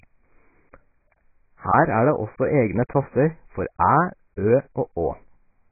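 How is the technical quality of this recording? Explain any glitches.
Poor: the speech is heavily band-limited and smeared for its whole length. Throughout, nothing is present above 2.5 kHz, so the audio sounds dull and muffled, with a warbling, watery texture on held sounds. The likely cause is AAC compression at a very low bitrate, pointing to roughly 12 kbps, where the encoder drops the high band and quantises what remains coarsely. A spectrogram would show a hard ceiling at 2.5 kHz and patchy gaps below it.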